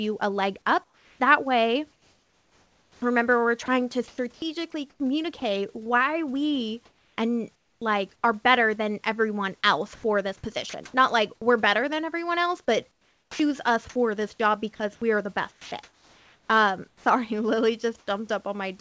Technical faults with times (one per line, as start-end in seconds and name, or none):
0.84-5.87 sound chopped by the voice detector
6.85-8.23 comfort noise in place of the background
9.95-10.93 sound chopped by the voice detector
12.91-13.39 comfort noise in place of the background
13.29-13.39 onset clipped by the voice detector
14.75-17.05 sound chopped by the voice detector
17.99-18.07 sound dropped by the voice detector